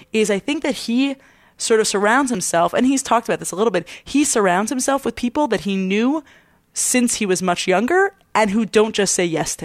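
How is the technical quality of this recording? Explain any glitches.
There's one glitch, a tiny skip at 2.35 s. It's an overlap between stream segments: timestamps collided at a 6-second segment boundary, a sliver of speech got trimmed away, and the waveform jumps.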